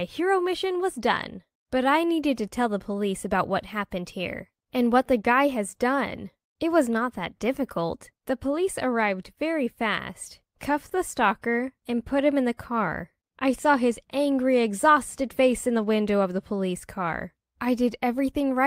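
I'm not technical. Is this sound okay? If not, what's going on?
Yes, it's fine: nothing in this recording sounds broken or out of place, so there's nothing here for you to worry about.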